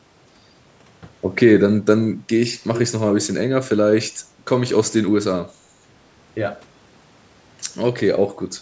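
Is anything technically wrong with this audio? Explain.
Yes, there are two faults.

From 1.68 s to the end, pre-emphasis has been left on. It follows the CD 50/15 µs curve: treble was lifted for the recording chain, and the matching de-emphasis was never applied. The curve's boost reaches about 8 dB at 10 kHz relative to 1 kHz. The speech turns thin, bright and hissy, with exaggerated sibilants. On a spectrogram, the upper bands look markedly denser from 1.68 s onward, up to where the call microphone processing's band edge stops all content at 8 kHz.

At 5.83 s to 5.87 s, the speech briefly dips for about 40 ms, sinking by roughly 10 dB at its deepest. This is likely speech suppressed in double talk. When both ends of a call talk at once, the echo canceller can mistake the near talker for loudspeaker echo and pull the level down with it. It is heard as a short dip in the level of the speech. 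The waveform shows a narrow pinch in the envelope. The spectrogram shows a brief faded vertical strip across the speech bands.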